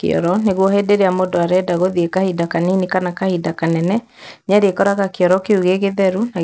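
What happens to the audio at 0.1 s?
At 0.1 s there is a rough buzz riding on the speech, a steady stream of tiny ticks about 100 times per second that is heard only while sound is present. It runs through the whole recording, not just this moment. The fault is a resampler restarted on every block. The audio was converted in separate 10 ms chunks, likely from 44.1 kHz down to 16 kHz. At each chunk boundary the converter had no real neighbouring samples to work from, so every edge carries a small error, and those errors repeat at the 100 Hz block rate.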